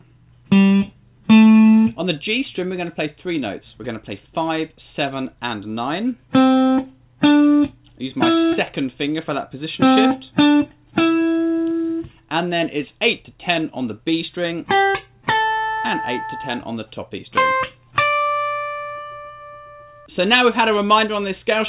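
No technical faults are audible.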